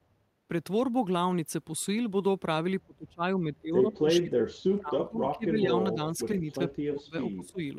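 Right at the start, from 0.17 to 0.35 s, there's background gated by the echo canceller. The room tone under the speech sinks by about 6 dB for a fraction of a second and then comes back. That's the canceller clamping the mic while it thinks the far-end loudspeaker is active, and letting go once it decides it isn't. It's a short dip, not a full dropout.

Later the talker's own voice gets pushed down in bursts, which sounds like speech suppressed in double talk: both ends were likely talking at once, and the canceller couldn't pull the near-end voice apart from the echo, so it ducked everything. The big stretch runs from 2.85 to 5.72 s, with the voice dropping in and out for about two seconds' worth of that span, at worst by something like 35 dB, nearly gone. Shorter hits follow at 5.93 to 6.18 s (around 10 dB), a tiny dip at 6.39 to 6.45 s (just a few dB), and a deeper one from 6.74 to 7.6 s (around 20 dB).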